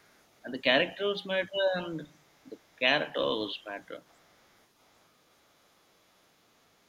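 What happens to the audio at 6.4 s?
Nothing goes wrong at 6.4 s: the speech there plays through intact, with no dropout, click, distortion or other fault.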